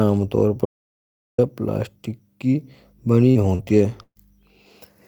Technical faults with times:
0.65-1.38 audio dropout to silence
3.31-3.62 short concealed packet loss
3.35-3.61 lost packet rebuilt from error correction
4.03-4.18 burst of packet loss

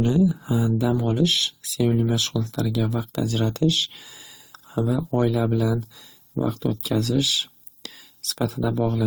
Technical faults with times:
0.00-9.06 transcoding between lossy codecs

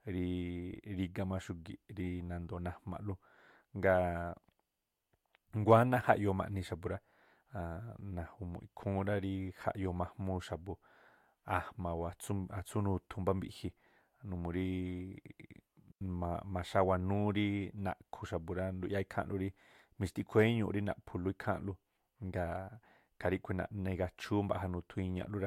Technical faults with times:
15.91-16.01 digital wireless dropout

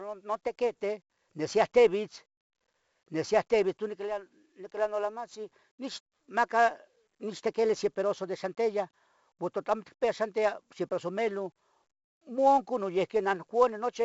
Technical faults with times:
0.00-14.05 4-bit ADPCM compression

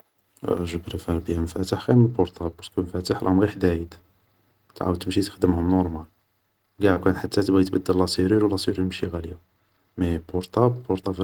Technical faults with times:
6.93-6.98 short concealed packet loss

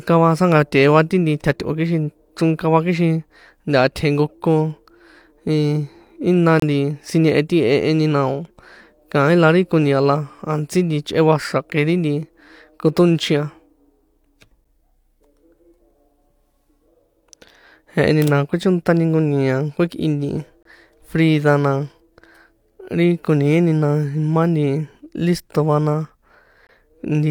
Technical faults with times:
2.58 gap between stream segments
6.60-6.62 gap between stream segments
14.64 gap between stream segments
20.63-20.65 gap between stream segments
26.67-26.69 gap between stream segments

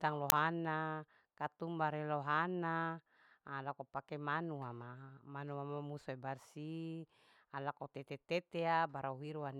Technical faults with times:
0.30-0.32 uninitialised buffer

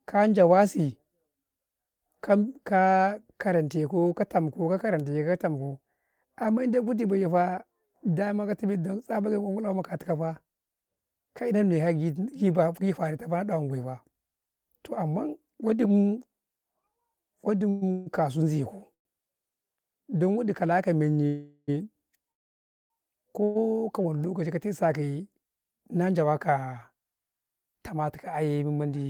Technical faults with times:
17.69-18.08 call audio freeze
18.94-19.07 call audio freeze
21.27-21.70 call audio freeze
22.32-22.92 call audio freeze
23.44-23.57 call audio freeze
25.49-26.31 jitter buffer speed-up

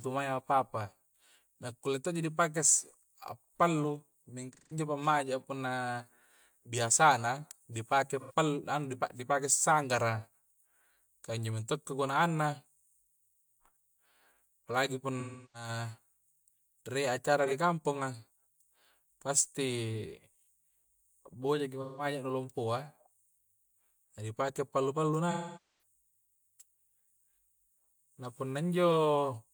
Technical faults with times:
4.53-4.77 AAC frame loss with concealment
8.20-8.33 AAC frame loss with concealment
15.20-15.69 AAC frame loss with concealment
17.46-17.53 AAC frame loss with concealment
21.81-22.05 AAC frame loss with concealment
25.31-25.82 AAC frame loss with concealment

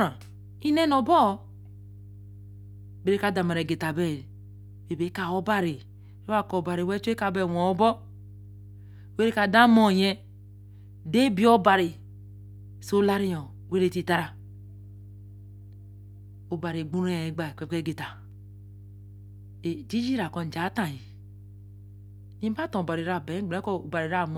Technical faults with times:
0.00-24.37 mains hum

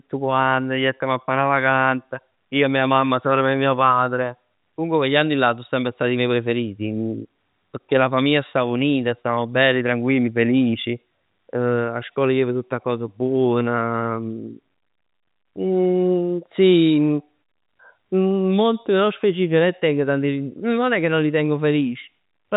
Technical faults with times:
none

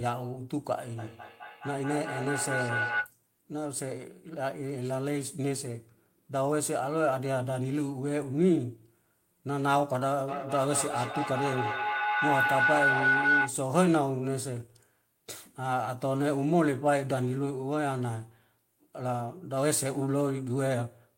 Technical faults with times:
0.98-3.14 feedback howl
10.28-13.60 feedback howl

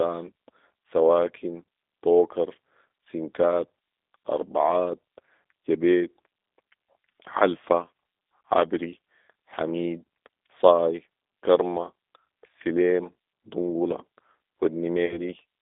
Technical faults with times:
0.00-15.62 G.729 codec
15.06-15.19 VoIP packet loss concealed by the speech codec

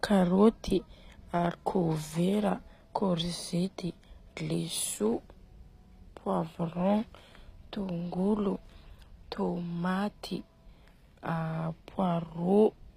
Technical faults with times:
0.00-12.96 HE-AAC compression

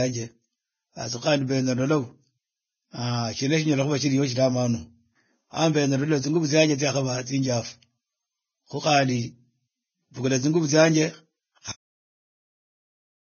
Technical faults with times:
0.00-13.30 Vorbis compression
11.72-13.30 cut-off end

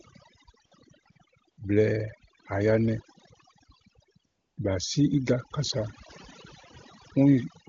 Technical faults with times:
0.00-7.69 overdone noise removal
0.65-0.71 AMR comfort noise
1.03-1.15 AMR comfort noise
1.51-1.57 AMR comfort noise
4.25-4.57 AMR comfort noise

